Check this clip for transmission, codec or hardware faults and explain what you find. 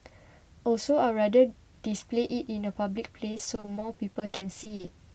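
There's one real transmission problem, near the end of the speech, heard over a call-codec path whose top end rolls off around 8 kHz. From 3.31 to 4.89 s there's repeated packet loss with a robotic sound: a couple dozen quick dropouts, the longest 60 ms, each patched by stretching the previous sound. About a third of that stretch is filler, so the speech turns choppy.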